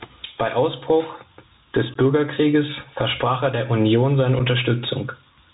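Gain pumping runs through this speech clip. The level pumps across a swing of around 15 dB, most likely from input gain set far too high with a fast limiter clamping it down. The Bluetooth CVSD headset codec also audibly degrades the whole clip. Nothing passes above 4 kHz, s sounds turn scratchy, loud bright sounds distort where the adaptive one-bit step can't keep up, and a granular hiss sits beneath the speech, consistent with a 64 kbps CVSD link. Unconcealed Bluetooth headset packet loss punches abrupt holes at 1.94 to 1.97 s and at 4.39 s, with the speech returning briefly quieter each time. The gaps of 15 ms and 7.5 ms point to about two lost packets and then one, replaced by silence or an idle pattern rather than patched over.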